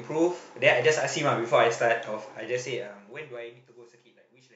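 From 2.32 s to 3.81 s, zipper noise rides on the speech as the level falls. The gain drops by roughly 25 dB in total. It moves in coarse steps of about 2 dB, with no smoothing between them. Each jump makes a small click in the waveform. The steps come about seven times a second, so the fade has a ticking, zipping texture.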